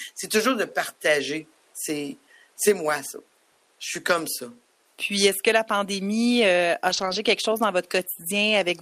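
At 4.13 to 4.19 s, and again from 6.89 to 7.15 s between "la pandémie euh a" and "quelque chose dans", the speech turns briefly rough and grainy. These are lost packets rebuilt from error correction: the following packet carried a low-bitrate copy, so about 40 ms, then 140 ms (which fits roughly two and seven packets), play coarser rather than silent. Unlike concealment, which guesses and smears, the content here continues intact, just noisier, over the room noise about 39 dB down.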